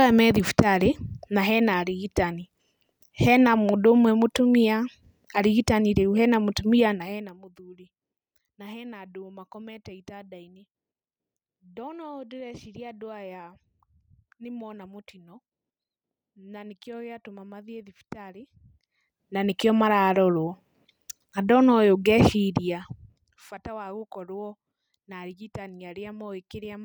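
No technical faults are audible anywhere in this speech recording.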